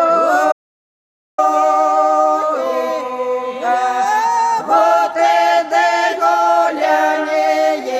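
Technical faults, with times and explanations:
Throughout: DECT cordless phone buzz. A thin, steady buzz sits under the whole clip at a fixed 100 Hz, with a dense stack of harmonics that make it sound rasping rather than like a pure hum. It stays about 35 dB below the wanted sound. A nearby DECT handset or base station transmits a short radio burst every 10 ms. The audio circuitry rectifies those bursts, turning the pulse train into an audible tone at the burst rate.
0.52 to 1.38 s: audio dropout to silence. The sound cuts off abruptly and then resumes just as abruptly, leaving a gap of about 0.86 s. The gap is silent, with no room tone. That is the giveaway: the signal path itself stopped delivering audio while the recorder kept writing silence. The likely cause is a brief loss of the input, such as a loose connection, a dropped link or a momentary mute. Whatever sounded during that span is lost.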